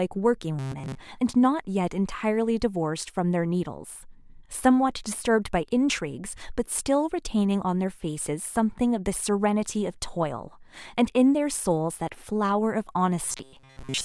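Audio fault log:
0.59–0.97 s and 13.25–14.05 s: robotic sound from repeated short buffers. A rigid 133 Hz metallic buzz follows the speech only roughly with no silent gaps, likely from one tiny buffer looping while most real audio is skipped.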